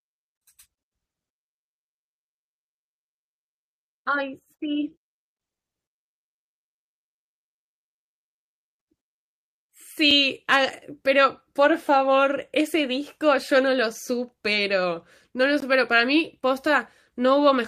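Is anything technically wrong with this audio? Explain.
Yes. At 10.11 s the speech gives a brief tick and at 15.6 s it drops to a short hole, a blocks of digital silence fault: about 5 ms, fitting a 256-sample buffer, then about 19 ms of silence, likely because output buffers went unfilled in time, cutting abruptly without any fade.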